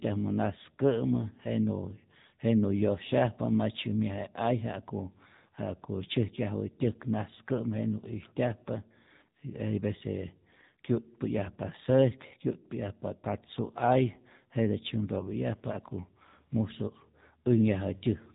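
Speech run through an AMR narrowband mobile codec throughout: nothing above 3.8 kHz, buzzy synthetic vocal-tract coloration pointing to roughly 7.4 kbps, not merely bandwidth-limited telephone filtering.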